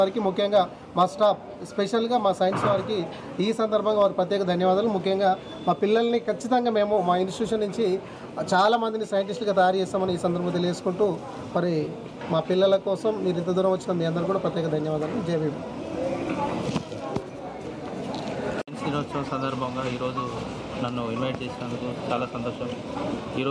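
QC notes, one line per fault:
No faults to note.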